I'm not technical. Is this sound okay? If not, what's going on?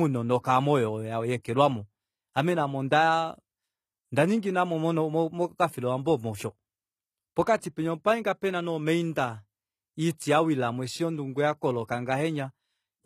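No. The speech has plainly audible damage throughout, likely from HE-AAC compression. The treble is rebuilt rather than kept, so s sounds turn gritty and metallic.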